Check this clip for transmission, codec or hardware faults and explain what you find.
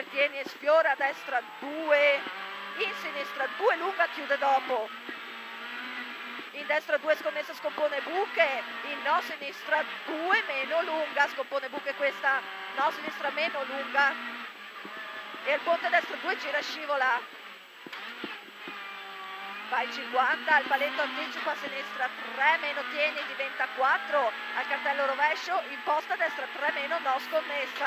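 No transmission, codec or hardware fault can be heard anywhere in the clip; the signal stays continuous and stable throughout.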